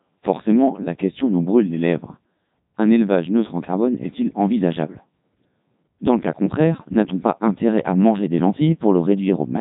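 The speech passed through a Codec 2 vocoder, which fits its 3.2 kbit/s mode, resynthesised from sine waves throughout: robotic, buzzy, with nothing above 3.8 kHz.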